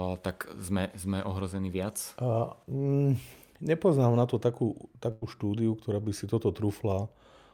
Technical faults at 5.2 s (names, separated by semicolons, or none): burst of packet loss